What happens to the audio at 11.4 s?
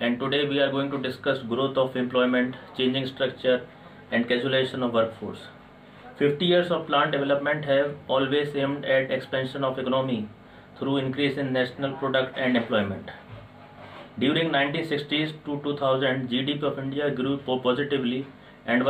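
Nothing goes wrong at 11.4 s; the audio plays through that moment intact, with no dropout, click or other fault.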